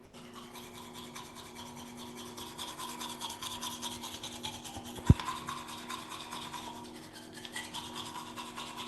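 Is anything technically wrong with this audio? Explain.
Yes, there are two faults.

From 0.05 to 0.13 s, about 80 ms of sound is missing. The likely cause is the sender's voice detector dropping the sound: it judged the opening material to be background and stopped transmitting, so the receiver filled the gap with comfort noise until the detector triggered again. On a waveform, this shows as a short stretch of low, even noise instead of the real signal. On a spectrogram, it appears as a flat, featureless band.

From 2.83 to 4.71 s, there are periodic USB or driver dropouts every 0.125 s, about fifteen in all. Each time, a background task blocks the audio path, and a fraction of a millisecond of sound is lost and replaced with silence. These are heard as a steady train of ticks while the sound plays. On a waveform, each one is a tiny flat notch. On a spectrogram, each one is a thin vertical broadband line, evenly spaced. 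The spectrogram also shows the call codec's ceiling at 12 kHz.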